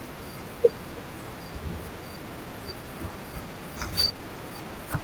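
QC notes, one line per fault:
1.91–1.93 s, skip ahead: about a second of speech is dropped with no fill, so playback jumps forward and the two sides join almost directly.
2.00–4.99 s, jitter buffer speed-up: the receiver trims pitch-period pieces repeatedly to shed about half a second of backlog, so speech runs at 117% speed at unchanged pitch and sounds hurried.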